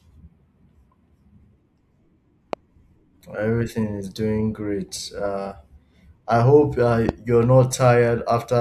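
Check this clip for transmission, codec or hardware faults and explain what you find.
Two loud pops interrupt the speech. The first runs from 2.53 to 2.55 s, the second from 7.09 to 7.11 s. Each is a single sharp click, peaking around 10 dB and then around 15 dB above the speech. The likely cause is a sudden electrical step or pulse, such as a plug or switch transient, static discharge, or a driver glitch, entering the signal chain. The circuits after it shape that pulse into a brief thump. The speech carries on underneath each pop.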